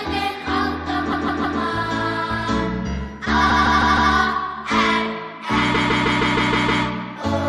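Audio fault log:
1.11–1.58 s, 3.49–4.12 s, 5.74–6.83 s: repeated frames. A 157 ms block replays 3, 4 and 7 extra times, stuttering.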